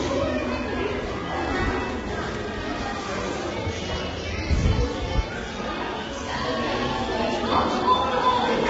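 From start to finish the sound is coarse and grainy, with a noisy fizz filling the gaps between tonal components and nothing audible above about 7.8 kHz, so the top end is cut off and dull. The damage is heavy and points to low-delay AAC compression, likely AAC-ELD at a bitrate around 16 kbps. Its short frames resolve harmonic detail poorly, and at so few bits the encoder fills spectral gaps with noise and discards the upper band.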